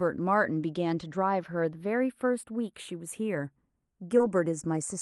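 From the start, the two channels drift apart. They were captured on separately clocked devices, off by roughly 20 parts per million. The delay between them creeps up to a fraction of a millisecond. Summed to mono, comb notches sweep slowly, like gentle flanging.

From 4.17 to 4.21 s there is a short concealed packet loss. About 20 ms of speech never arrived. The receiver filled the gap by extending the preceding sound, then blended back. It is heard as a brief smear or wobble.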